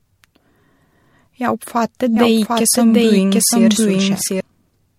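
From the start, the speech has a swirly, hollow, smeared quality, with consonant attacks blurred and nothing above 16.5 kHz. That's generation loss, likely from a few rounds of MP3 encoding, each pass piling up fresh quantisation noise, and it sounds like rates around 64 kbit/s.

At 2.17 s a doubled audio track kicks in abruptly: a second full-band copy, about as loud as the original, trailing around 0.7 s behind with no room colour. It's likely a slower capture path or an edit overlap, and it cuts off sharply at 4.41 s.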